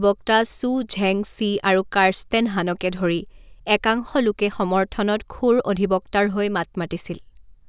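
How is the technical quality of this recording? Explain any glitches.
No glitches can be heard.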